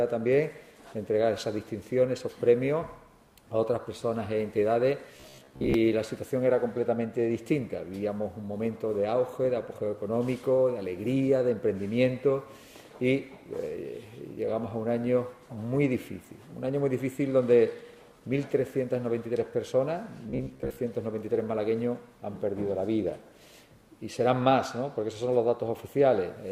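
At 5.17 to 5.74 s and again at 20.30 to 20.81 s you get robotic sound from repeated short buffers: a rigid, metallic buzz near 66.8 Hz. That's likely audio arriving too slowly, with about half the time filled by looping roughly 15 ms chunks.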